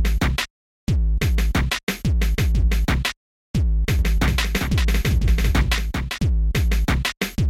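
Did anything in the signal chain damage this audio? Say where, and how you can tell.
Yes. From 3.99 to 6.19 s there is a doubled audio track, most likely a second, slower capture path or an editing stage holding two copies of the recording out of step. A full-band duplicate trails the original by roughly 0.4 s at around 5 dB lower, with no decay or room colouring, so it reads as a clean second layer rather than an echo. It appears and vanishes abruptly at those two times.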